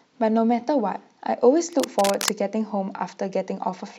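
A speech clip with a burst of scratchy, rustling noise from 1.72 to 2.29 s, nearly as loud as the voice: cable scratch noise, likely from a worn connector being moved.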